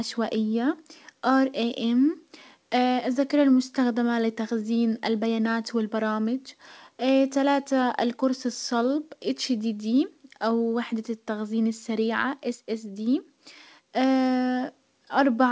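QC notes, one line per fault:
Nothing stood out on listening to this speech, which arrives over a call path with nothing above 8 kHz.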